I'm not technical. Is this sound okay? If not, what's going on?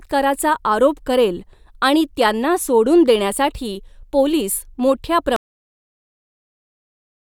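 No. This clip has a cut-off end: the last portion of audio was never saved, so at 5.36 s, right after "सोडून देण्यासाठी पोलिस मोठ्या", the speech stops abruptly into dead silence.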